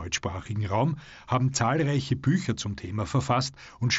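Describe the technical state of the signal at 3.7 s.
At 3.7 s the speech is intact, with no fault at that moment, carried through the Bluetooth mSBC headset codec with its band limit at 8 kHz.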